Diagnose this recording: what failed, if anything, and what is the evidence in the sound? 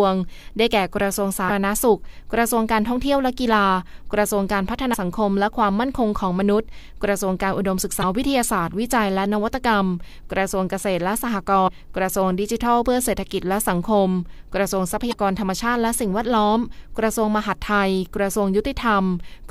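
The failure is at the codec stage: damaged data in a compressed stream. Five brief glitches break through the speech, at 1.45–1.51 s, 4.93–4.96 s, 7.98–8.04 s, 11.64–11.70 s and 15.09–15.15 s, each roughly 30 to 60 ms long and heard as a short chirp or blip. Corrupted bytes make the decoder misread the affected frames and lose sync until it finds the next valid frame header.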